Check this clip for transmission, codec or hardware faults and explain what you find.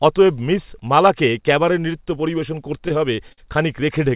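One transmission fault stands out. Repeated stalls (stutter) run from 2.88 to 3.40 s, just after "ক্যাবারে নৃত্য পরিবেশন করতে": packets arrived late, so the jitter buffer emptied four times and the receiver stretched the last sound, about 93 ms in all, longest 51 ms. Nothing drops out, but the phrase drags and hiccups. The call path's G.711 A-law coding leaves nothing above 4 kHz.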